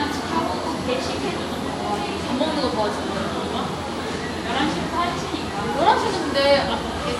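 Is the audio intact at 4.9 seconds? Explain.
No. Throughout the clip, including 4.9 s, the audio was likely transcoded between lossy codecs, re-encoded at a lower rate, so the different codecs' artefacts are heard together and nothing remains above 16.5 kHz.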